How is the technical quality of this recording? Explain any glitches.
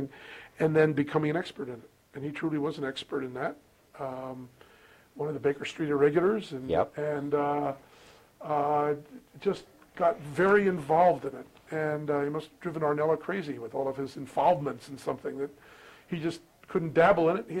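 No glitches turn up anywhere in this recording. Nothing interrupts or disturbs the audio at any point.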